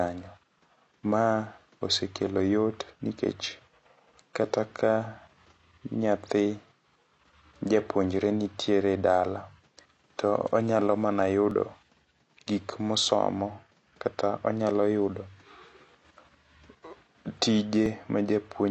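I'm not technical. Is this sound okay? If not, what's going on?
No. The speech sounds dull and a bit smeared the whole way through, with a fizzy, warbly edge on hissing sounds. That points to AAC compression, which was likely squeezed hard to save space, throwing away fine detail and the top end.

There are also two small skips, at 11.51 s and 17.86 s. Each is a tiny jump where a few thousandths of a second of sound went missing. That is likely a dropped buffer (overrun), where the computer fell briefly behind and lost a slice of audio.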